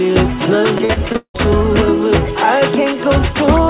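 From 0.78 to 1.36 s, repeated packet loss (robotic sound): six gaps, longest 180 ms, filled by extending prior audio, leaving 52% of the stretch concealed and the sound choppy.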